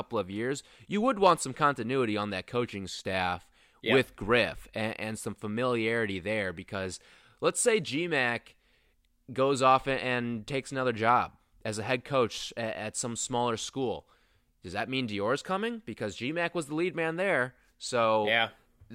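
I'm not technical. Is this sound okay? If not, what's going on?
Yes, nothing wrong can be heard in this recording.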